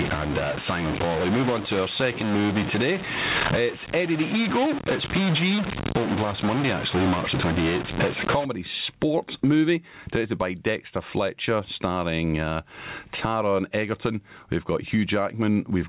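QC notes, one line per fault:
Throughout: gain pumping. The gain swings by roughly 15 dB. Loud and quiet passages sit unnaturally close in level, giving a squashed, breathing quality. The likely cause is input gain set far too high, with a fast limiter or compressor clamping down on each peak and releasing in the pauses.
0.00 to 8.45 s: stuck bit. Distortion rides on the signal, and the pauses fill with a gritty noise instead of going quiet. This stops just before "sports movie directed by". It is likely one data bit held at a fixed value, from a broken line or converter. Samples where that bit should differ are offset by its weight, so the error follows the waveform. Near silence, the bit flips with the sign of small values, producing the noise in the gaps.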